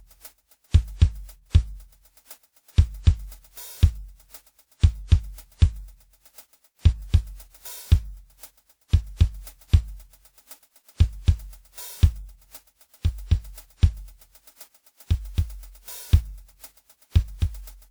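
Throughout the music there is generation loss. The sound is swirly, smeared and hollow, and attacks blur. It is likely the result of around seven passes through a lossy codec, consistent with WMA at 128 kbit/s, each adding fresh noise and holes. Nothing sounds above 20.1 kHz.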